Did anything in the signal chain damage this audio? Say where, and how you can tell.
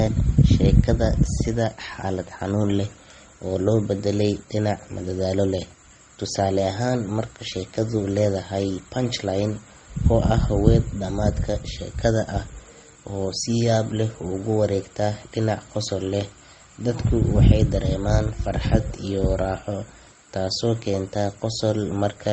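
Yes. Throughout, two layers of swirly, smeared codec artefacts overlap with nothing above 9.6 kHz. This is likely transcoding between lossy codecs at the codec stage, which fits low-bitrate MP3 re-encoded as Opus.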